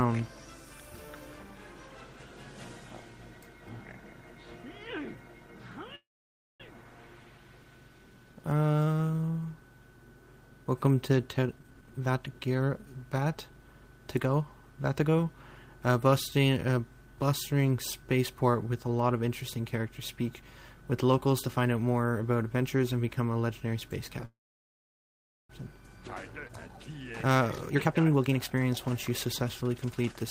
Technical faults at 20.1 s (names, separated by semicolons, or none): none